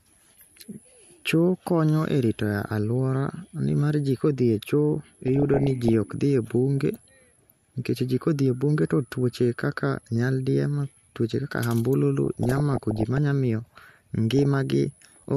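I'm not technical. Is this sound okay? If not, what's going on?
No. DAB burbling occurs at 5.26 to 5.93 s, 12.26 to 13.18 s and 14.31 to 14.57 s. It puts short blips of noise into the speech. Weak digital radio reception let errors slip past correction, so slices of the sound got short blips of noise.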